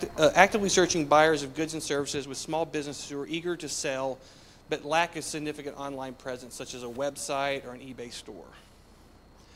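From 0.78 to 1.91 s, ticking rides on a drop of about 10 dB. This is zipper noise: the gain steps without smoothing, around 150 times a second.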